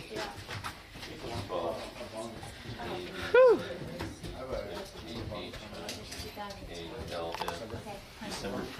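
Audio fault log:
No fault can be heard anywhere in the clip. Nothing in it calls for a timed entry in this log.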